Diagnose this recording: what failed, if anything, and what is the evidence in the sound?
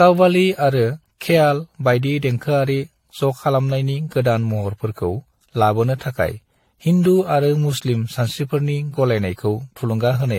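The codec stage failed: the speech shows generation loss, likely from being re-encoded with AAC about five times. Throughout, the sound is swirly, smeared and hollow, consonant attacks blur, and nothing remains above 16.5 kHz, which fits repeated passes at a modest bitrate.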